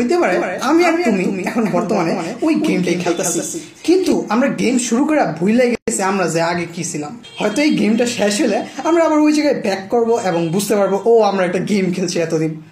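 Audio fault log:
0.32–4.12 s, doubled audio track: A second copy of the signal was mixed back in, likely because it was captured again through a slower path or an edit left two copies out of step. A full-band duplicate trails the original by about a fifth of a second, about 5 dB quieter. It has no decay or room colour, so it sounds like a flat, mechanical echo, and it cuts in and drops out abruptly at both ends.
5.75–5.88 s, gap at a join of encoded pieces: Two separately encoded pieces were spliced without trimming. The encoder's start-up delay and the padding of the final frame were both left in the joined stream. The result is a 124 ms gap in otherwise continuous sound. Its edges are smeared by the codec, and the sound resumes exactly where it left off, as if briefly paused.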